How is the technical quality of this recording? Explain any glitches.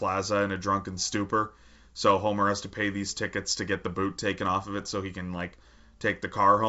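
Nothing in this speech recording stood out on listening, with the G.722 wideband telephone coding at 64 kbit/s carrying the sound up to about 7.7 kHz as that format does.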